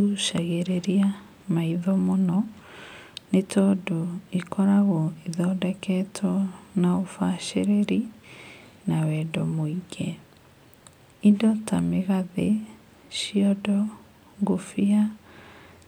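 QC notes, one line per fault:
No faults to note for QC on this speech recording.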